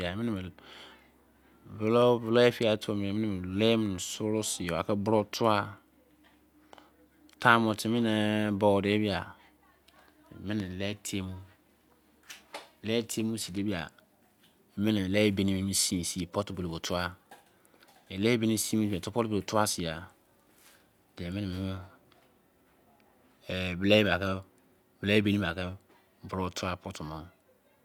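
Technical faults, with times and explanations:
Nothing technical stands out here; the recording just runs along without any glitches worth pointing to.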